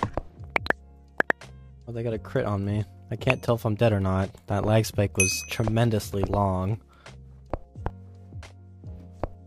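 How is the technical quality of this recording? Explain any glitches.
No glitches or faults detected.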